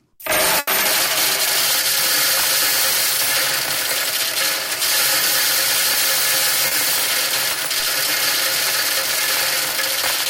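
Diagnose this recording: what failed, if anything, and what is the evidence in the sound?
Network stage. There's a burst of packet loss from 0.59 to 0.70 s: the receiver keeps the last bit of sound going for about 80 ms and fades it down, then jumps back in further along. Roughly 80 ms of the real audio is simply skipped.

Network again, but smaller: a short concealed packet loss at 6.67 to 6.74 s. About 40 ms didn't reach the decoder in time, so it filled the hole by extending the preceding sound and blending back into the real signal. You hear a quick smear rather than a clean dropout.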